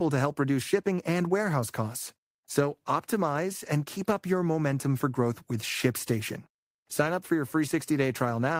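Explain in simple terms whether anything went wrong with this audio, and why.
Nothing went wrong with this recording of speech. No technical problem can be heard at any point, so there is nothing here that needs fixing.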